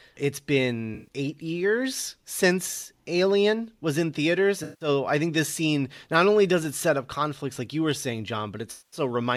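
Speech with three brief smeared, phasey patches at 0.94 to 1.08 s, 4.63 to 4.88 s and 8.71 to 9.00 s. This is AAC frame loss with concealment: the decoder rebuilt about 128, 171 and 213 ms of missing audio from the last good spectrum.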